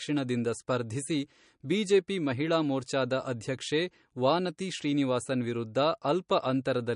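A speech recording that was likely squeezed through MP3 compression at a low bitrate, somewhere near 40 kbps. The encoder has dropped everything above 10.6 kHz and left weak spectral detail flickering, so throughout the clip the speech sounds dull, watery and swirly.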